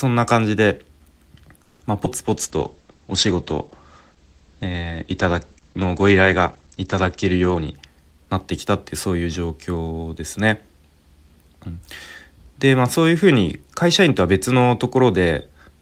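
At 1.63 s the speech halts for about 0.2 s, to 1.83 s. In place of the next sound, the receiver stretches the last one into a 180 ms fading buzz with no true silence. This is a call audio freeze, likely caused by packets held up in transit until the jitter buffer ran dry. When they arrive, playback resumes exactly where it stopped, so nothing is lost, but everything after it now runs 180 ms later.

From 2.05 to 2.08 s there is a short concealed packet loss. About 40 ms of audio never reached the decoder in time. Only about 10 ms of synthetic continuation covers the gap before playback joins the real signal again, so the moment comes across as a quick smear or wobble rather than a dropout. Because most of the missing stretch is skipped instead of filled, the accumulated delay shrinks by a few tens of milliseconds.

A call bitrate drop starts at 2.28 s and lasts until 7.81 s. The sound turns coarse and muffled, consistent with the encoder being pushed from around 32 kbps down to about 11 kbps after the bandwidth estimate fell. 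At that rate the coder discards everything above 8 kHz, where it had been reaching 20 kHz. The lowest rate holds for about 5.5 s, giving a dull, watery quality until the rate recovers.

From 7.54 to 9.07 s a jitter buffer speed-up is audible. It overlaps the end of the low-bitrate stretch. The buffer had built up more audio than its target, so the receiver trims it by repeatedly cutting out short pitch-period-length fragments, around 150 ms in total. Playback runs at about 110% speed with unchanged pitch, and the speech sounds hurried until normal pacing returns.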